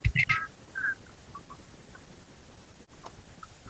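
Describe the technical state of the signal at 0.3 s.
Two faults overlap here. Speech suppressed in double talk runs the whole clip, from 0.0 to 3.69 s. The level is pushed down in uneven, chopped steps, dropping at its deepest by around 40 dB. The likely cause is an echo canceller turning down the talker along with the loudspeaker echo while both sides speak. Unlike a dropout or a gated mute, the sound dips and thins in pieces rather than cutting out cleanly.

An echo leak also sits from 0.13 to 0.38 s. A copy of the sound trails the original by 185 ms at roughly equal loudness, likely residual loudspeaker echo the canceller failed to remove. The fixed delay sets it apart from room reverberation, which smears continuously instead of repeating.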